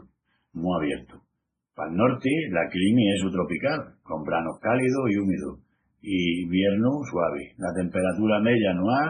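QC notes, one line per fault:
Throughout: transcoding between lossy codecs. Dull, smeared speech with nothing above 9.7 kHz and layered swirly artefacts, likely a low-rate MP3 re-encoded to WMA.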